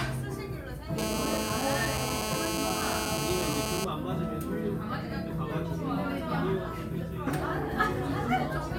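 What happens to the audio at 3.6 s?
At 3.6 s the audio is still under GSM phone buzz, which runs from 0.98 s to 3.85 s. A nearby 2G handset in a call transmits in bursts about 217 times a second, and the audio circuitry rectifies those radio pulses into the signal path. The result is a hard, raspy 217 Hz buzz, rich in harmonics and unrelated to the sound itself. It holds steady at about 2 dB below the wanted signal.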